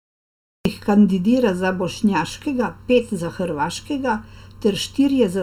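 The opening 0.65 s is digital silence, a cut-off start: capture began late, so the sound appears abruptly at 0.65 s, just before "kandidira za bošnjaškega pet", with no attack or fade. The waveform is a flat line jumping straight into the speech, and a spectrogram shows a hard vertical edge.

Throughout, channel delay (comb filtering) gives a hollow, phasey colour. One channel trails the other by roughly 0.7 ms, and summing them cancels shared content at evenly spaced frequencies. The first notch is near 700 Hz, and the spectrogram shows steady dark horizontal bands repeating up the spectrum.

Generation loss is also present for the whole clip: a swirly, smeared texture with blurred consonant onsets and hollow patches. It is likely caused by several successive MP3 encodes, which fits a chain around 128 kbit/s. The spectrogram shows speckled holes and nothing above about 19.9 kHz.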